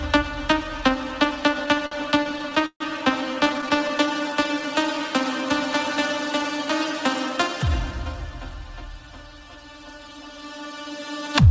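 The audio passes through a call path whose G.722 coding leaves a flat ceiling at 8 kHz on the spectrogram. Repeated stalls (stutter) occur from 1.60 to 2.82 s and again from 3.44 to 3.91 s, as packets arrived late and the jitter buffer kept running dry. In the first stretch, 13 gaps are filled with continued sound totalling 305 ms, the longest 141 ms and faded. The second has 8 brief gaps of up to 14 ms. Nothing is lost, but the sound drags. On the waveform these show as repeated, copied-looking segments and dips in level. A jitter buffer slow-down follows from 3.84 to 5.09 s. To rebuild its reserve, the receiver repeated single pitch periods or pause fragments, adding 95 ms and playing at 93% speed with unchanged pitch. The spectrogram shows stretched, smeared features there. A jitter buffer speed-up from 7.15 to 8.07 s goes the other way. Short pitch-period pieces totalling roughly 70 ms were cut to shrink an oversized buffer, so the audio runs at 108% and sounds hurried, with compressed, tightly packed features visible on the spectrogram.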